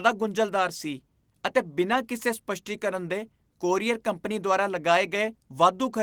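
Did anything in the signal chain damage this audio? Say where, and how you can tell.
Yes, a lost packet rebuilt from error correction at the network and codec stage. Between "ਸੀ ਅਤੇ" and "ਕਿਸੇ ਸਪੱਸ਼ਟੀਕਰਨ ਦੇ ਕੋਰੀਅਰ", 1.93 to 1.95 s, there's a brief rough, noisy patch with no gap. That fits one 20 ms frame filled in from the low-bitrate backup copy carried by the next packet.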